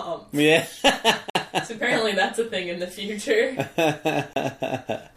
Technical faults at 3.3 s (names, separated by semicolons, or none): none